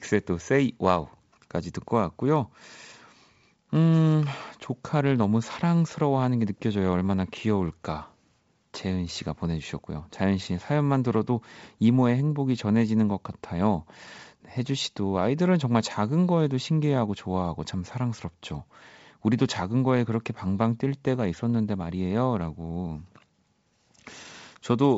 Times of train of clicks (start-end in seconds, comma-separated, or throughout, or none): none